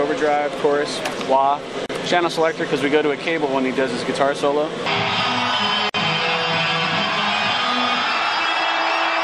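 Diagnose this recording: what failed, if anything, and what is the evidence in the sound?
Gaps at joins of encoded pieces occur at 1.86 to 1.89 s (about 34 ms) and 5.89 to 5.94 s (about 49 ms), four seconds apart. The sound drops to silence, its edges smeared by the codec, and resumes exactly where it stopped. This is a codec-stage fault: pieces encoded separately were concatenated without trimming, so each join keeps one run's end-of-stream padding and the next run's start-up delay.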